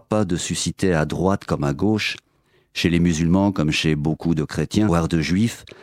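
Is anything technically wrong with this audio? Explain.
Yes, there is a CD skip at 4.89 s. A knock or disc flaw threw the laser onto a different turn of the spiral, so the player muted for only a few milliseconds and resumed elsewhere. The sound ticks and jumps abruptly to another point.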